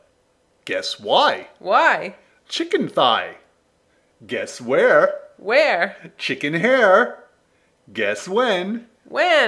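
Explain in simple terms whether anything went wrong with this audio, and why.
Nothing went wrong here; no problems can be heard.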